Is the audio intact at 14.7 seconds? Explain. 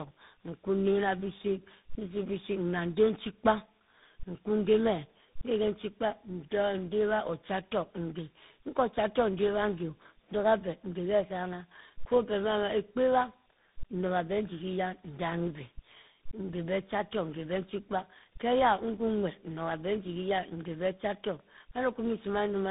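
No. At 14.7 seconds, as throughout the clip, there is tandem speech coding. The speech was decoded and re-encoded through what sounds like three speech codecs in succession, each compounding the last one's damage, leaving it rough, warbly and muffled, with nothing above 3.8 kHz.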